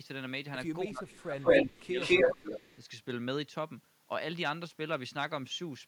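From 0.87 to 1.49 s the speech dips by around 20 dB. This is speech suppressed in double talk, likely an echo canceller turning its own talker down along with the loudspeaker echo while both talked at once. At 1.08 s a faint copy of the voice, delayed by 206 ms and about 25 dB below it, slips through. A much stronger copy, about 10 dB above the speech, follows from 1.41 to 1.65 s. This is echo leak, likely loudspeaker pickup the canceller failed to remove. The dipping returns from 1.65 to 1.99 s and again from 2.29 to 2.45 s, while the loud 206 ms echo recurs from 2.01 to 2.77 s.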